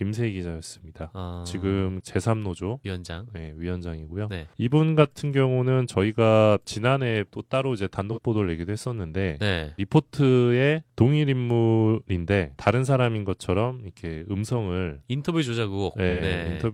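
At 8.12 s, about 43 ms of the speech turns briefly smeared and noisy, which fits one lost AAC frame; at 16.09 s a longer patch of about 85 ms, consistent with two frames, does the same. This is AAC frame loss with concealment: the decoder rebuilt the missing spectrum from the previous good frame. Unlike a dropout or a click, there is no silence or sharp edge, just a phasey blur.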